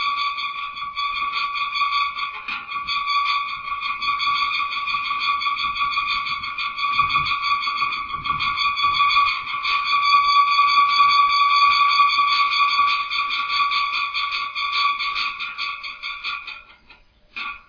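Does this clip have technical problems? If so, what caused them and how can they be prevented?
No, the audio shows no technical faults.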